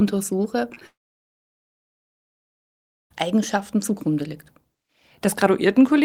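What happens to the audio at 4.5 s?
Nothing goes wrong at 4.5 s; the speech carries on intact through that moment with no audible fault.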